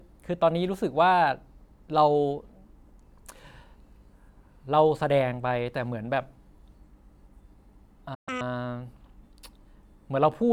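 At 8.14 s the speech just drops out, a playback stall lasting roughly 124 ms until 8.29 s. It's most likely the player running dry on data or its thread getting blocked, so the output goes silent mid-flow before picking up again.

Right after, from 8.29 to 8.41 s, there's a catch-up at higher speed: the backlog is played at double speed, which pushes the pitch up around ten semitones for a brief chipmunk-like moment before it snaps back to normal.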